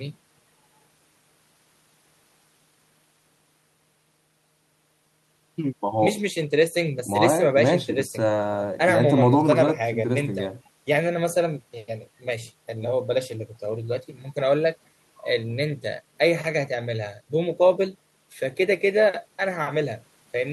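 No technical faults can be heard anywhere in the recording.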